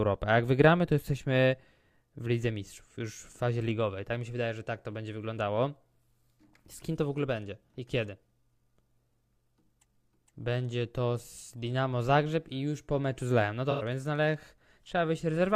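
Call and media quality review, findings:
AAC frame loss with concealment, 13.71 to 13.82 s: a smeared, noisy patch of about 85 ms, which fits two lost frames. Decoder rebuilt the gap from the last good spectrum, too short to fade to silence.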